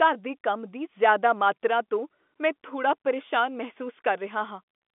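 Nothing's wrong with this one: it's speech coming over an ordinary telephone line, so the sound lives in the band from about 200 Hz up to 3.5 kHz, and that narrowness is simply how the line carries it.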